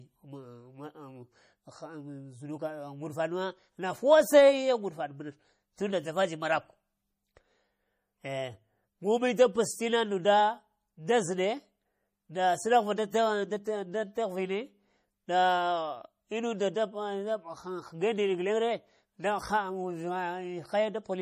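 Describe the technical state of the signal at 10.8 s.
At 10.8 s you're hearing the same damage that runs through the whole clip, and it's plainly audible: nothing at all above 15.3 kHz, plus a watery, swirly texture where quieter detail flickers in and out. That's most likely MP3 compression at a starved bitrate, something in the region of 40 kbps. The encoder chops off the treble at a fixed point and drops weak frequency lines frame by frame, which is where the swirl comes from.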